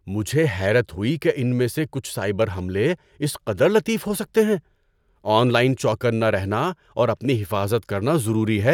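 No audible technical faults.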